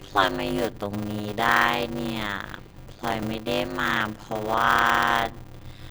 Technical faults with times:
0.00-5.91 block size mismatch (padded)
2.57-3.23 processor overload crackle

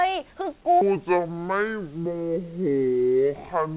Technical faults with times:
0.81-3.76 section at the wrong speed

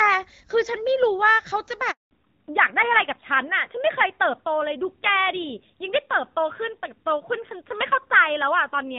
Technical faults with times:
1.91-2.11 handover gap
2.11-8.98 fallback to narrowband

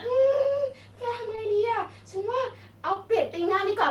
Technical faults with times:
1.35-1.39 short concealed packet loss
2.93-2.97 short concealed packet loss

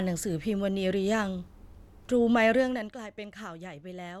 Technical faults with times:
none

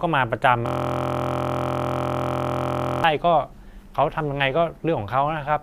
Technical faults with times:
0.66-3.04 system hang loop

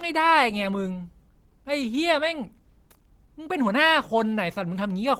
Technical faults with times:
0.00-5.20 Opus compression

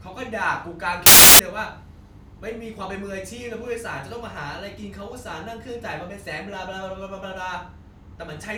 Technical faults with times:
1.06-1.39 samples built from the wrong bytes

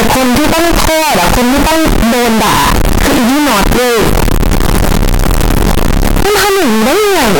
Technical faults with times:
0.00-7.40 signed and unsigned mixed up

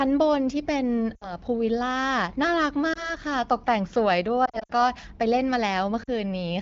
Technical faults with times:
1.15-1.33 lost AMR speech frames
2.93-3.13 lost AMR speech frames
4.45-4.71 lost AMR speech frames
6.03-6.09 lost AMR speech frames

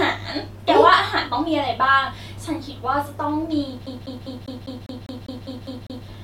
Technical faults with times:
3.86-6.07 CD stuck on one turn

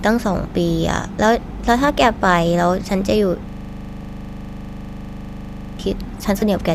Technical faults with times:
3.49-5.79 system hang loop
4.02 lost LE Audio frames
6.40-6.42 lost LE Audio frames

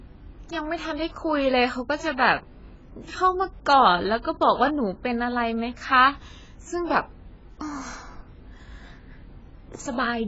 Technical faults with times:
0.00-10.27 AAC compression

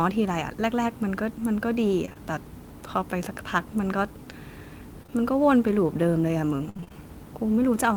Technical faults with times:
2.05-2.17 short concealed packet loss
5.03-5.12 short concealed packet loss
6.69-6.94 repeated packet loss (robotic sound)

